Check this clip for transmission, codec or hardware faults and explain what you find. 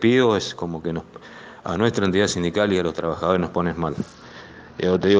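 One fault turns up near the end. From 4.0 s to the end there's a Bluetooth SBC bit pool drop: the treble goes dull and gritty noise creeps in, which fits a bit pool falling from 28 to 8, around 72 kbps.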